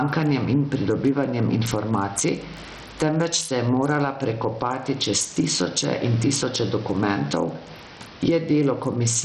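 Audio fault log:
Throughout: gain pumping. The room noise sits well below the speech, while loud and soft parts are squashed closer in level, a swing of around 15 dB, likely from excessive input gain driving a fast limiter. The waveform looks flattened, with peaks clamped.
Throughout: Bluetooth SBC compression. The treble is missing above 13.6 kHz and flickers below that, with gritty, aliased noise riding on the speech, consistent with a low bitrate such as 64 kbps. On a spectrogram the top bands appear blotchy and blocky, then go blank.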